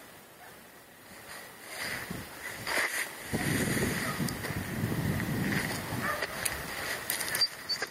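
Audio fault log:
Throughout: gain pumping. The level swings by about 10 dB. Loud and soft passages sit unnaturally close together, and the whole sound feels squashed. The likely cause is input gain set far too high, with a fast limiter or compressor clamping down on each loud moment and releasing between them.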